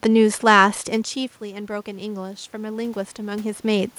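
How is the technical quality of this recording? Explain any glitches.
The recording has one technical fault, a stretch of automatic gain rising through most of the speech, sitting on top of room noise.

From 1.40 s to 3.95 s the automatic gain control is audibly rising. Around 1 s the talker moves away from the microphone, and the input level drops by about 13 dB. The gain control reads this as a quiet signal and slowly adds about 6 dB to compensate. Because it amplifies everything together, the voice and the room noise swell upward at the same time over more than two seconds. The level is only partly restored. Near 3.5 s the talker moves again, which shifts the voice level at the microphone while the gain is still climbing.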